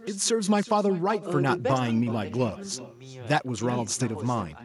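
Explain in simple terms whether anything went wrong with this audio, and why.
Throughout the speech there is echo with no canceller: the far end's loudspeaker feeds its microphone, returning a fainter, thinner copy a bit under half a second later.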